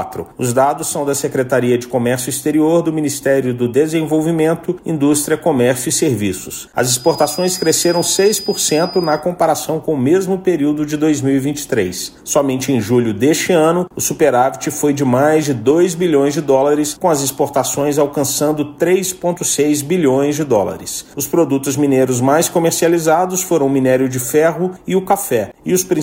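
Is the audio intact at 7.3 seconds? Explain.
No. From 6.90 to 9.26 s a feedback whistle sits at 5 kHz, well below the main sound, most likely from a loudspeaker-to-microphone loop held just at the edge of feedback. Unlike a fixed electronic tone, its level swells and fades slowly without ever building.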